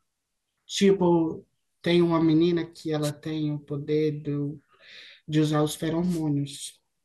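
The analogue wireless microphone's radio signal faded twice, at 3.02 to 3.11 s and 6.08 to 6.23 s, letting receiver noise through as brief static swishes over the speech: wireless microphone noise hits.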